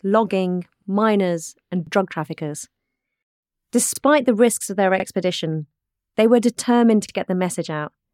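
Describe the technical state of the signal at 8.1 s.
At 8.1 s the speech signal is intact, with no audible fault.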